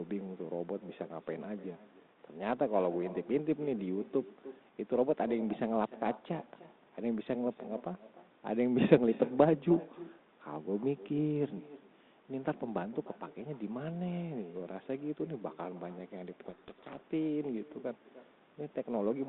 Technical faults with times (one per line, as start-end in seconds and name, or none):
0.00-19.29 echo with no canceller
16.46-16.98 codec payload misread